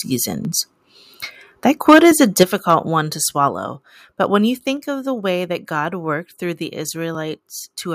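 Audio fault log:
1.88 to 2.43 s, microphone overload: the loudest syllables turn harsh and crackly, likely because the input was driven about 7 dB past the converter's limit. The waveform shows flattened, squared-off peaks on a few percent of samples, and the spectrogram shows bright broadband smearing above them.
2.43 s, 3.48 s and 4.77 s, microphone volume stepped down: the speech and background drop abruptly by about 7 dB, then about 3 dB, then about 2 dB, likely as the call software cut the input level after the overload. The waveform envelope shrinks in clean steps, and the spectrogram dims uniformly across all frequencies at each step.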